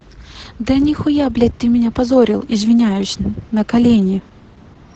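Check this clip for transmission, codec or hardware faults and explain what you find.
There's one codec fault, and it runs through the whole clip. Opus voice compression in SILK mode caps the speech near 8 kHz and codes excitation coarsely, so it sounds muffled, hoarse and slightly robotic, consistent with roughly 10 kbps.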